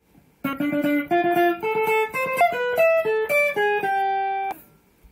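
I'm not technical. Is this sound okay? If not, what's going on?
No. Brief glitches at 0.52, 2.40 and 4.51 seconds come from damaged data in a compressed stream: corrupted bytes confuse the decoder until it finds its place again.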